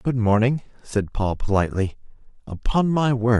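A short speech recording with nothing technically wrong with it.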